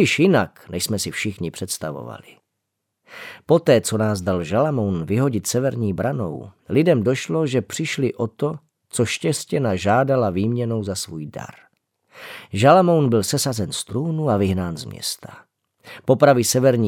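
Nothing in the speech recording points to a technical fault at any moment.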